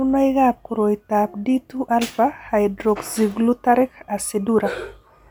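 No technical faults can be heard anywhere in the recording. At no moment does the speech show any disturbance that would count as a fault.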